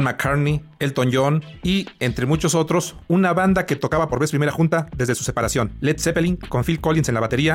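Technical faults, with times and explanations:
3.83–7.55 s, time-stretched section: pace abruptly jumps to 1.37 times faster at unchanged pitch, sounding rushed, likely from software dropping short slices to shorten it.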